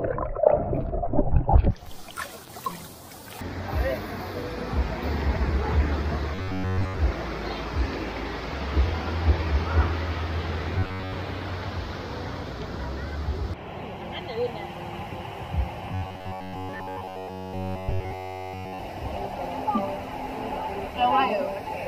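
Robotic sound from repeated short buffers appears three times: 6.35 to 7.0 s, 10.78 to 11.15 s, and 15.92 to 18.79 s. Each stretch turns into a rigid, metallic buzz at 93.8 Hz. The likely cause is new audio arriving too seldom. The last fragment, about 10.7 ms long, is replayed instead, and the real audio is skipped. In the first two stretches most of the sound is repeated. In the last, practically all of it is.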